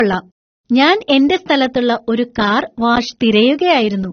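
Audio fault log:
Throughout, low-bitrate audio saved at a high bitrate: the speech has nothing above 6.3 kHz and carries the artefacts of heavy compression, yet the file itself is a high-rate MP3. The likely cause is an earlier low-rate encode, one that points to something around 24 kbit/s AAC, whose losses the later encode simply preserved. What separates this from a plain lowpass is that the codec artefacts persist beneath the band limit, not just the cut-off.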